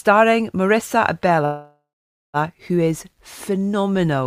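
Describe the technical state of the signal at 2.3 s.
At 2.3 s the signal is near the end of a call audio freeze (1.45–2.37 s): a 0.88 s concealment fill decays to near silence, likely from delayed packets emptying the jitter buffer. Playback then resumes without loss.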